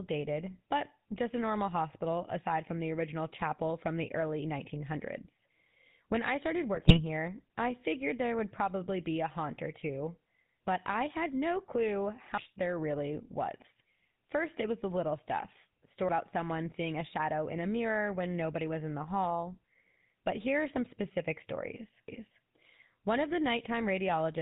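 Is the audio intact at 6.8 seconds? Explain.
No. GSM bit errors strike from 6.75 to 7.0 s. Over that quarter-second, corrupted bits reach the decoder and damage the parameters it rebuilds the sound from. Bad filter values warp the spectrum, and bad pitch or gain values push the level out of control for individual frames. The sound breaks into squawks, pops and a gargling texture. The damage suggests an error rate of a couple of percent spread across several frames in a row.

The same moment also carries the GSM full-rate codec artefacts present throughout the clip, and they are plainly audible. The codec rebuilds speech from a vocal-tract model driven by regularly spaced pulses, keeping only a sparse subset of the excitation. That gives the speech a buzzy, gravelly roughness, and nothing above 4 kHz survives. This fits the 13 kbps full-rate coder.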